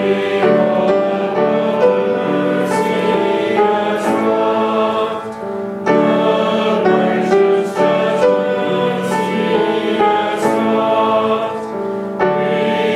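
No technical faults can be heard anywhere in the audio; the signal holds steady throughout without interruption.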